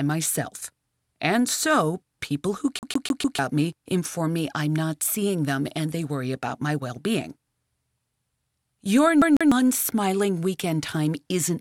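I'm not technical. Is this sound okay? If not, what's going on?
No. At 2.79 to 3.39 s, after "so people who", and at 9.22 to 9.52 s, before "smiling weekend", there's a CD stuck on one turn: the same 0.15-second sliver repeats four times, then twice, with tiny gaps. That even, machine-like stutter sets it apart from random dropouts.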